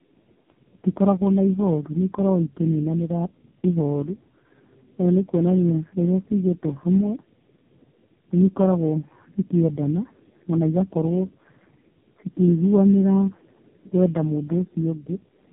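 Tandem speech coding runs through the whole clip: the speech sounds like it passed through three low-rate speech coders in a row, each re-encoding the previous one's already damaged output, consistent with a chain of G.729A, GSM full rate and a final AMR-NB stage. The errors stack, leaving the speech rough, muffled and warbly beyond what any single codec would cause, with nothing above 3.8 kHz.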